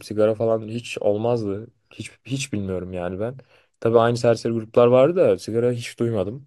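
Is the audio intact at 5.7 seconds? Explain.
Yes, the speech is intact at 5.7 seconds, with no dropout, click, distortion or other fault at that point.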